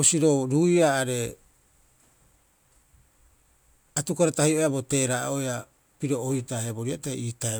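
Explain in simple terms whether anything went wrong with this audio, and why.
Nothing stood out as wrong when listening to this speech recording.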